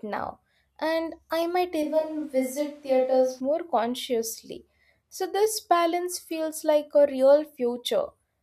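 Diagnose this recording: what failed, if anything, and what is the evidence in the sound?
From 1.83 to 3.40 s the speech abruptly turns roomy and thin at steady level. Capture stage: likely a switch to a distant microphone.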